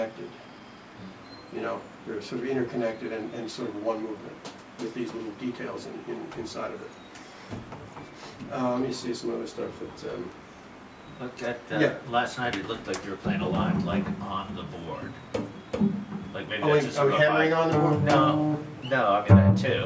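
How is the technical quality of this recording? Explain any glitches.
No glitches to explain: nothing in the recording points to a technical fault at any point.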